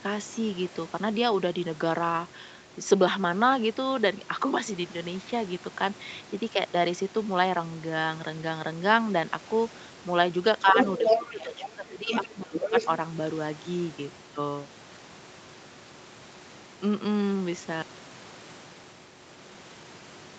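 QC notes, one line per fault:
10.62–10.78, 10.98–12.11 and 12.29–12.74 s: speech suppressed in double talk. The talker sags by about 5 dB, then by about 15 dB, likely because the echo canceller ducked both voices at once. The waveform envelope caves in.
10.78–11.33, 11.6–11.7, 12.07–12.29 and 12.56–12.88 s: other side's voice leaking through. A second voice surfaces, ranging from about 5 dB above the talker to about 15 dB below, likely residual loudspeaker echo the canceller missed. On the spectrogram, a separate harmonic stack fills the dips.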